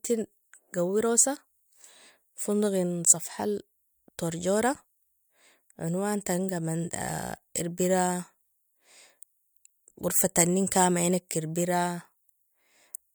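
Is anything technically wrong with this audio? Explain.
No, nothing technically wrong can be heard in this speech recording.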